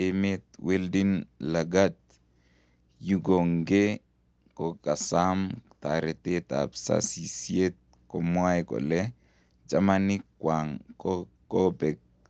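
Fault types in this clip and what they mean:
No faults can be heard in this speech clip. It has passed through a call's microphone processing and codec path, which leave nothing above about 8 kHz.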